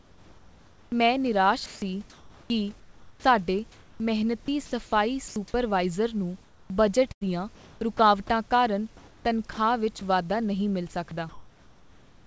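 From 0 to 0.92 s, before "ਮੈਂ ਨਿਰਾਸ਼", the background is a steady, featureless hiss about 2 dB quieter than the real room. This is comfort noise in place of the background, likely because transmission paused while no speech was detected.

Between 1.66 and 4.72 s the speech turns choppy, with about 1.4 s in total swapped for flat noise. This is sound chopped by the voice detector, which was likely switching the sender on and off. The same choppiness returns from 6.44 to 7.99 s, with about 0.6 s replaced, and from 8.97 to 10.01 s, with about 0.3 s replaced.

From 5.28 to 5.36 s a brief piece of speech gives way to steady noise. This is sound dropped by the voice detector, which likely mistook quiet speech for background. It happens again at 11.09 s, right after "ਵਾਧਾ ਨਹੀਂ ਮਿਲ", where a brief bit of sound gives way to noise.

From 11.09 s to the end, the background is again replaced by uniform comfort noise, bandlimited like the rest of the call audio to nothing above 8 kHz.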